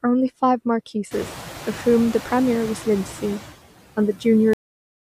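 Noise suppressor artifacts run through the whole speech clip. The suppressor estimates the steady background frame by frame and lowers those bands by about 10 dB, so the noise sinks in the gaps between words and comes back up underneath them. This is most noticeable after the room noise rises by about 21 dB at roughly 1 s and then sits about 15 dB below the speech.

A cut-off end occurs at 4.53 s. The speech stops mid-sound and falls straight to digital silence with no natural decay, which suggests the final buffers were never written or played. The remaining 0.56 s is empty.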